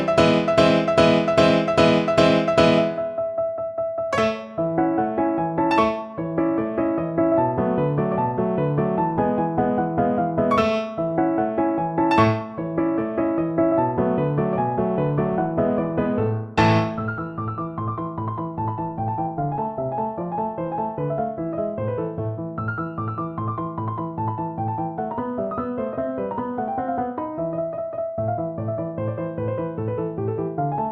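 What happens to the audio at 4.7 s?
Nothing goes wrong at 4.7 s; the audio plays through that moment intact, with no dropout, click, distortion or other fault.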